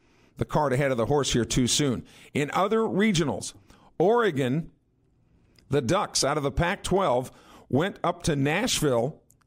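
Nothing in the speech stood out as a technical problem on listening.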